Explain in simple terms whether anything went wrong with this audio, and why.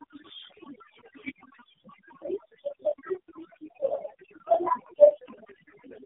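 Two things went wrong, and both last the whole clip. Overdone noise removal silenced the background too hard. It leaves twinkling specks. The speech also went through the AMR narrowband mobile codec, an old phone-call format squeezed very hard. Nothing above about 3.8 kHz survives, so the voice sounds muffled, buzzy and synthetic.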